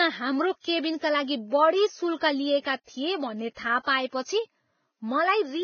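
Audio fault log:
Throughout: Vorbis compression, heavy damage. There's nothing above about 6.6 kHz, so the speech loses its top end and sibilants go dull. What's left in the treble comes across hissy and grainy, with roughened tones and smeared consonant onsets. That's likely a low-bitrate Vorbis encode, pointing to something around 16 to 17 kbps. The encoder keeps a smooth spectral outline but quantises the fine detail so coarsely it turns into noise-like texture at similar energy.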